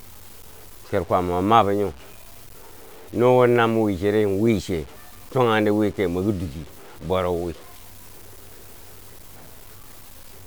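Speech with low bit depth without dither throughout: gritty, signal-following grain, quiet tails dropping to silence or sputtering, noise roughly 25 dB down, likely truncation to around 7 bits.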